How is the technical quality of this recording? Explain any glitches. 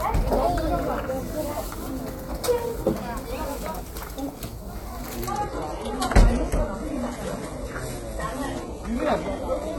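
The recording has one clear glitch, a quality drop partway through. At 5.27 s the stream falls back to a lower bitrate and stays there to the end. The connection likely slowed, so the adaptive player switched to a leaner version on the fly, which fits a jump from a roughly 96 kbit/s AAC stream down to a 16 kbit/s HE-AAC one. The change is abrupt with no gap. The top end loses its natural detail and takes on a synthetic, swishy quality, nothing above about 11.8 kHz survives, and smeary codec artefacts creep in.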